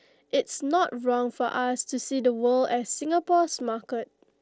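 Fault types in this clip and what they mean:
Concealed Bluetooth headset packet loss: A voice packet between headset and phone went missing at 3.6 s, about 7.5 ms of speech, which fits a single lost packet. The phone filled the gap by repeating a closely matching stretch of recent waveform. The patch is nearly inaudible.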